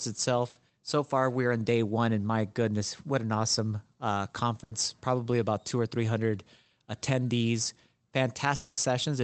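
At 0.49 s and again at 4.63 s, just before "so far we're in" and between "what an awesome uh" and "probably about two or", there are bursts of packet loss. Each lasts under a tenth of a second, with the last sound stretched and faded before the speech jumps ahead. They are too short to reach silence.

From 8.55 to 8.79 s comes a longer gap, likely a network dropout. The concealed sound fades across the full quarter-second, and it is clearly longer than the earlier bursts. Throughout, the call path's top end stops around 8 kHz.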